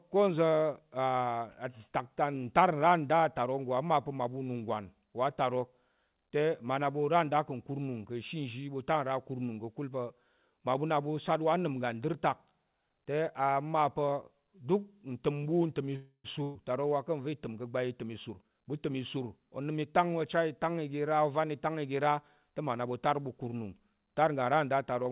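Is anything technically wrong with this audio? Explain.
Yes, there are three separate problems, all in the back half of this speech clip, which is coming through a narrowband call path with nothing above about 4 kHz, consistent with G.711.

From 15.96 to 16.39 s there's a call audio freeze. The last sound gets stretched into a fading buzz or hiss for roughly 0.28 s, then about 60 ms of silence, before the speech picks up where it left off. Delayed packets likely drained the jitter buffer, so this inserts a gap without losing speech.

Right after, from 16.43 to 16.57 s, comes a burst of packet loss. About 120 ms of speech never arrived in time, so the receiver held the last sound and faded it out, then jumped ahead. That chunk is simply gone.

From 18.04 to 20.05 s there's a jitter buffer speed-up. The buffer had too much audio queued, so it kept snipping out tiny pitch-period slices, about 0.3 s in total. 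The speech runs roughly 14% faster at the same pitch and sounds hurried.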